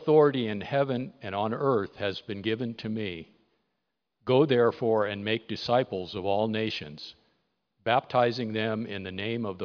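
No technical faults are audible.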